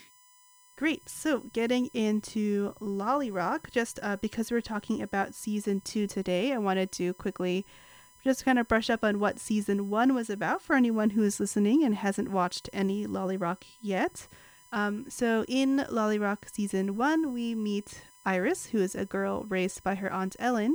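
From start to finish the speech carries USB whine, a steady tone built on 1 kHz with a comb of harmonics reaching up to 20 kHz, where it is strongest, sitting roughly 30 dB below the voice. It comes from the bus drawing current in 1 ms frames and leaking through shared power or ground. Its fixed 1 kHz spacing separates it from mains hum, whose series rests on 50 or 60 Hz.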